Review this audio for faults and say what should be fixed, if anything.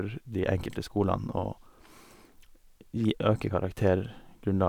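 Nothing here needs fixing, since no faults turn up anywhere in this short bit of speech.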